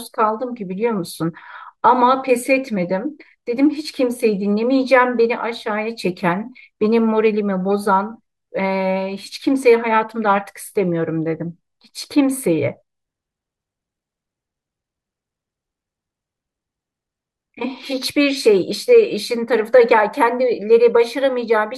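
No technical faults can be heard anywhere in the speech recording, which stays steady and intact throughout.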